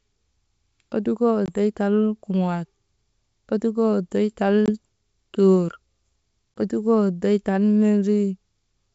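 Packet loss on an ADPCM call cuts single 20 ms holes at 1.46–1.50 s (before "tal kuŋaal"), 4.66–4.71 s (after "ottukoo oddoy tal") and 6.58 s. Each shows as a sharp-edged blank column on the spectrogram and a flat waveform gap. Speech resumes with brief distortion while the decoder's predictor re-syncs.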